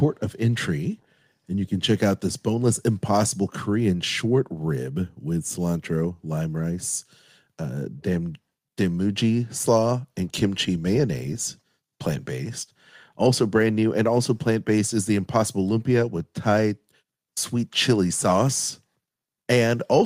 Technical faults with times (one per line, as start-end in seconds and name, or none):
none